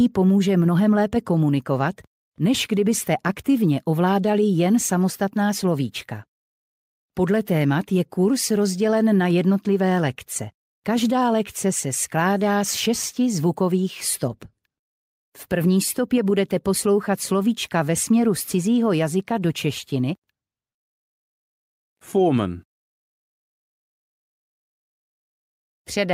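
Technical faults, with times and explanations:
No technical faults are heard, so there are no times or explanations to give.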